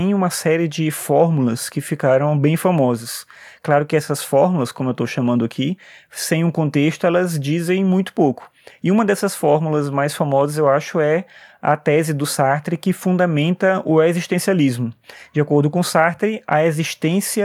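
No technical faults are audible.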